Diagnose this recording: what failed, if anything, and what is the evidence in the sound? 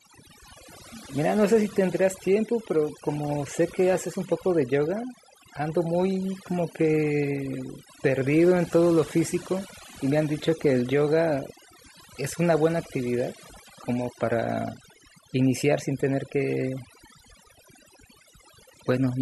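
Overdone noise removal in the call-processing stage: a suppressor set far too strong cuts individual frequency bands whenever they sit near its noise estimate. Throughout the speech, pauses collapse to near silence with twinkling specks, and quieter voice components vanish.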